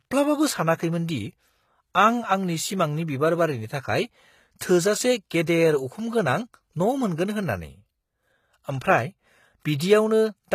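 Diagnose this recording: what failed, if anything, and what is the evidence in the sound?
Codec stage. The speech is plainly damaged throughout, with nothing above 14.9 kHz and treble that doesn't match the lower bands. This is likely HE-AAC compression, with replicated treble fitting roughly 20 kbps.

Codec stage again. Pre-echo at 9.78 to 9.80 s: about 23 ms of hiss precedes an attack, because block quantisation noise spills into the quiet moment before it.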